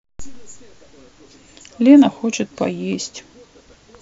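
No technical faults are audible.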